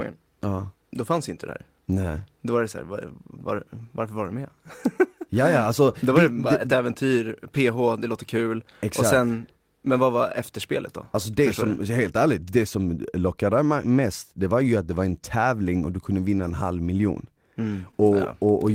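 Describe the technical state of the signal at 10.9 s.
At 10.9 s the speech signal is intact, with no technical fault audible at that moment.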